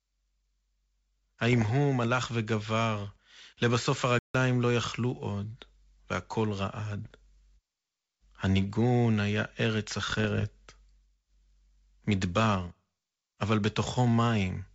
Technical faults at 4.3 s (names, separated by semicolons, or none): playback stall